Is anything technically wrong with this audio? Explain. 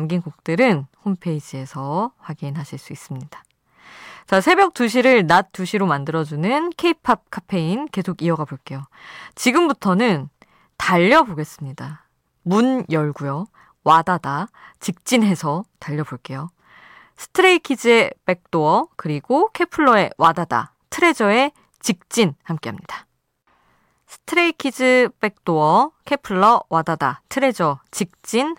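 No, nothing is technically wrong.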